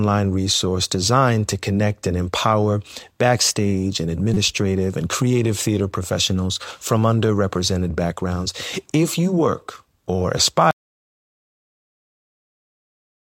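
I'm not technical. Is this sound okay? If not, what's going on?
No, there are faults. Two brief glitches are corrupt frames decoded: damaged pieces of the compressed audio played anyway, giving a short chirp or blip of wrong sound. One is at 4.34 to 4.37 s, after "and empower backstage and", the other at 5.91 s, after "and creative theater". Unlike a dropout, they add sound rather than remove it.

From 10.71 s to the end there is an audio dropout to silence. After "you work or", the sound cuts off into dead silence with no background hiss at all, unlike a natural pause, likely because the input was lost while recording continued.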